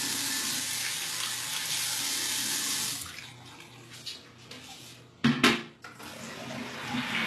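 From start to finish the audio carries plainly audible HE-AAC compression damage, likely from a very low-bitrate stream around 16 kbps. The upper band is rebuilt by spectral band replication rather than coded, so the treble sounds gritty and metallic, with overtones that fail to line up above the crossover. On a spectrogram, the upper region shows repeated, blocky copies of lower-band texture, and nothing at all appears above 12.3 kHz.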